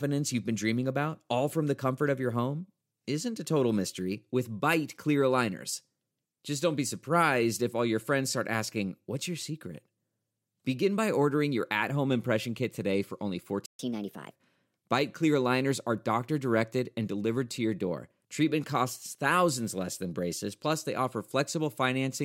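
A playback stall interrupts this speech recording at 13.66 s: the sound cuts to silence mid-flow for about 131 ms, until 13.79 s, and then resumes. A gap that abrupt and brief is most likely the player running short of buffered data, or its audio thread being held up, so that nothing reached the output until it recovered. A catch-up at higher speed follows straight after, from 13.79 to 14.32 s. To win back the lost time, the player resamples its backlog and runs at 1.25 times normal speed, which lifts the pitch by roughly four semitones. The voice therefore sounds briefly hurried and raised before settling back to its normal rate and pitch once the delay has been made up.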